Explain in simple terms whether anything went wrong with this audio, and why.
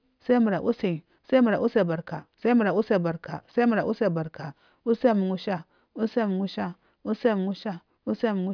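Nothing went wrong; no faults can be heard.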